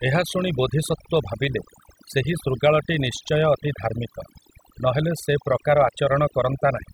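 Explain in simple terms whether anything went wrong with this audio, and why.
The background behind the speech drops and breaks up into twinkling specks. That is overdone noise removal: a noise reduction tool set too strong shut down narrow frequency bands near the noise, taking quiet parts of the voice with them.

From 0.11 to 6.92 s there is also a soft, steady rattle of tiny ticks, about fifty a second. These are clock slip clicks, likely from two devices running on unsynchronised clocks about one part in a thousand apart, so a single sample keeps getting dropped or repeated.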